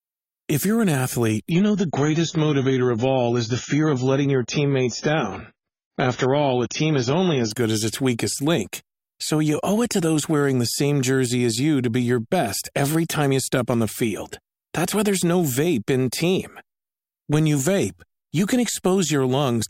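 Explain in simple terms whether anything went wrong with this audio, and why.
From 1.5 to 7.5 s, before "good as its weakest", an adaptive stream at a lower bitrate played: the connection slowed, so sound turned abruptly dull and artefact-laden.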